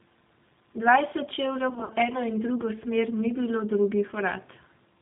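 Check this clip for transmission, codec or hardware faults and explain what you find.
Two faults are present: the whole clip has passed through a low-bitrate speech codec, and a short burst of packet loss was concealed by that codec.

G.729 codec, throughout: the speech was rebuilt at 8 kbit/s from a vocal-tract filter, a pitch predictor and a few pulses per sub-frame, with nothing above 4 kHz. The damage is plainly audible: muffled, slightly rough and synthetic-sounding.

VoIP packet loss concealed by the speech codec, 1.70 to 1.93 s: about 110 ms of audio went missing, scattered over roughly 200 ms with the longest gap 60 ms. The decoder extended its last pitch and filter at falling gain, so the speech turns into a buzzy tone or coloured noise and fades, recovering weakly into "eno in drugo smer".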